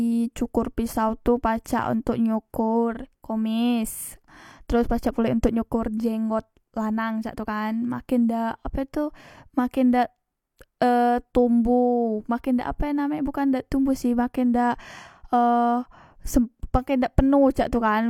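Pre-echo at 1.65 s, after "cokor pisau tu": block-wide codec quantisation noise spreads 11 ms ahead of a sharp attack, a hiss that blurs its onset.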